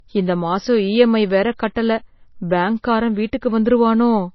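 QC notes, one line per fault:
throughout, low-bitrate audio saved at a high bitrate: the speech likely passed through a very low-bitrate MP3 encode, roughly what 24 kbit/s gives, then was re-saved at a high rate that cannot restore what was lost. Nothing remains above 5.8 kHz, so sibilants sound dull and muffled.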